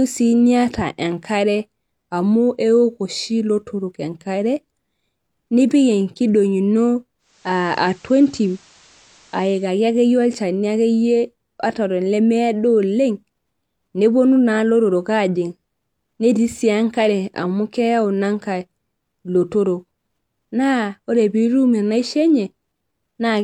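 Digital radio blending to analogue, 7.18 to 9.79 s: the receiver cross-faded over 375 ms to FM, bringing faint hiss and a level shift of about 1 dB.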